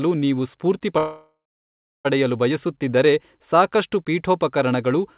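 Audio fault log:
0.98–2.07 s, call audio freeze: right after "ನೀವು ಸ್ಫೂರ್ತಿ" the sound stalls for about 1.07 s. The last fragment carries on briefly as a fading buzz or hiss, then about 0.69 s of silence. The audio then resumes exactly where it stopped, with nothing lost, so everything afterwards runs about 1.07 s late. The likely cause is delayed packets draining the jitter buffer. The surrounding audio, band-limited at 4 kHz, fits a narrowband G.711-type call path.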